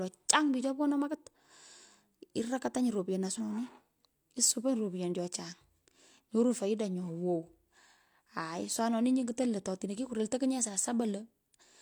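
At 3.35 to 3.41 s, damaged data in a compressed stream corrupts a short stretch of the encoded speech. The decoder misreads those frames, loses sync and hunts for the next valid frame header, leaving a brief glitch of roughly 60 ms.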